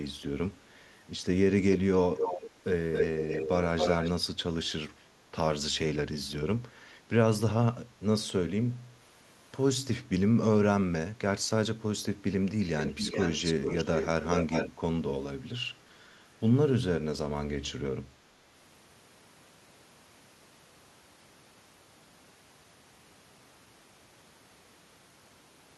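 Echo leak occurs at 1.74–1.79, 2.17–2.51, 2.93–4.11, 12.8–14.07 and 14.23–14.7 s. A delayed copy of the speech returns, 275 ms late, then 419 ms from 12.8 s. It is about 5 dB quieter, but as loud at 2.93 s. Likely an incompletely cancelled loudspeaker echo.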